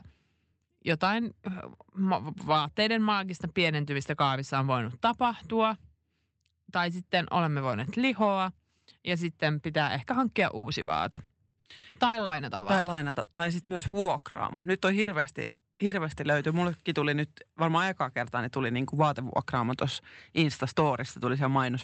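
From 10.57 to 15.94 s, repeated packet loss leaves frequent holes, up to 180 ms, patched by extending prior sound, giving choppy, robotic speech rather than one isolated dropout.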